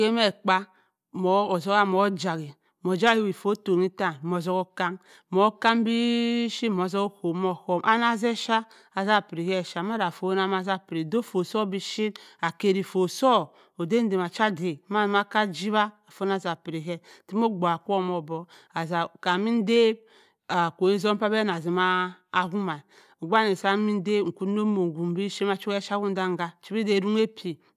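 Listening to this speech recording, nothing stood out as a technical problem.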